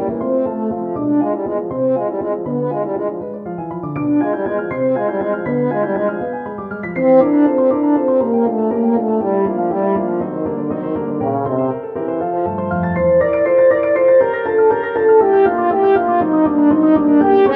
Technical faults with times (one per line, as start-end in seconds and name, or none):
none